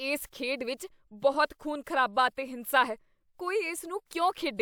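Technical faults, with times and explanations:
No technical faults can be heard in this speech recording; the signal stays continuous and stable throughout.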